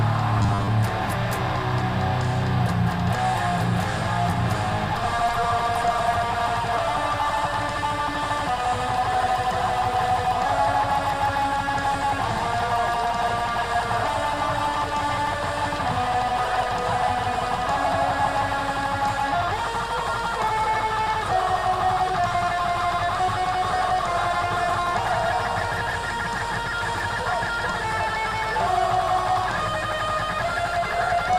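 From 0.38 to 0.69 s there is robotic sound from repeated short buffers: a rigid 100 Hz buzz, likely a 10 ms block replayed for about half that stretch.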